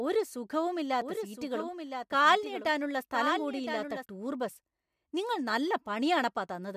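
Speech with a doubled audio track from 1.02 to 4.06 s, starting just before "ടൂർ ബസ് നിങ്ങൾ നല്ല". A full-band copy trails about one second behind and about 10 dB lower, likely from a slower second capture path or an out-of-step edit. On a spectrogram it appears as shifted duplicate patterns with no decay, starting and stopping abruptly.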